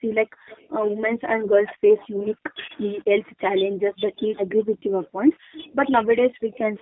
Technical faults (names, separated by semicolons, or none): G.729 codec; speech suppressed in double talk